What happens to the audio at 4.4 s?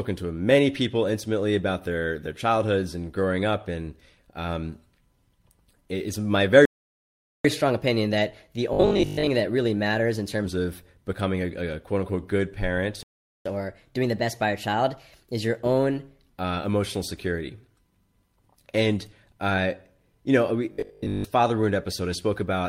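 At 4.4 s the speech carries on intact, with no dropout, click, distortion or other fault at that point.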